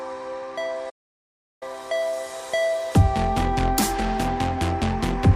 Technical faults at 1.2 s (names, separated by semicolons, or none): playback stall